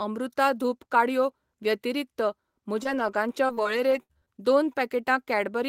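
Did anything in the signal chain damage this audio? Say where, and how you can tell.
Yes. From 2.83 to 4.44 s the speech turns choppy and robotic, with nine short holes up to 62 ms. This is repeated packet loss on the network, each gap patched by extending the last sound.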